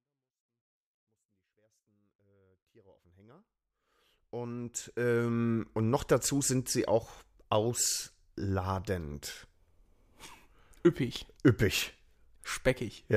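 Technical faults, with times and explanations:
Nothing stood out on listening to this speech, which rises gently from silence over roughly the first 5.7 seconds.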